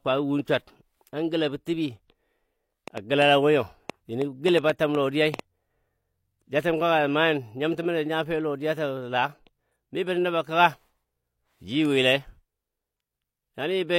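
From 2.88 to 5.40 s a train of clicks, around ten pops at an irregular 4 per second, peaks roughly 10 dB above the speech, likely from electrical interference or a faulty connection or supply. At 11.85 s a bit error spike appears: a flipped bit jumps three consecutive samples by a power of two, giving one sharp, broadband tick.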